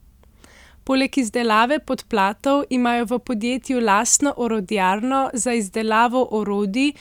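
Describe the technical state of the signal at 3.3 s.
The signal at 3.3 s is intact, with no audible fault in the speech at that moment.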